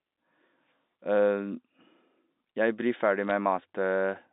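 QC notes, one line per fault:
3.30 s, bit errors on a digital phone line: a brief burst where a handful of flipped bits each changed a single telephone-band sample.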